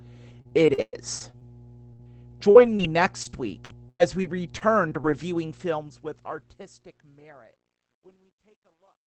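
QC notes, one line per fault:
Throughout, mains hum: a steady low 60 Hz tone sits under the speech at about 25 dB below it, with some low harmonics, as a ground loop or nearby transformer couples the power line into the signal.
0.41 to 1.43 s, repeated packet loss (robotic sound): choppy, metallic speech with pieces missing. Eight gaps, the longest 109 ms, about 26% of the stretch is filled by continuing the last sound, and about a tenth of a second is rebuilt from error-correction copies.
1.93 to 2.01 s, burst of packet loss: the last sound is held and fades out, then the speech resumes further on. About 60 ms never arrived, and the receiver stretched the last sound while turning it down, so that stretch of speech is lost.
2.51 to 2.57 s and 2.77 to 2.81 s, short concealed packet loss: quick smears or wobbles where 40 ms and then 20 ms went missing. The decoder extended the preceding sound from its pitch or as shaped noise and blended back into the real audio.
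2.55 to 2.57 s, 2.65 to 2.67 s and 2.79 to 2.81 s, lost packet rebuilt from error correction: no gap, just 20 ms flashes of rougher, noisier sound. In each case the next packet carried a low-bitrate Opus copy of the lost one, and the decoder played that in its place.
5.26 to 9.07 s, truncation distortion on a fade: during the fade-out, the tail turns gritty, worst from 6.95 s. The fade keeps too few bits without dither, which points to roughly 11 bits, so quiet waveforms collapse into coarse steps.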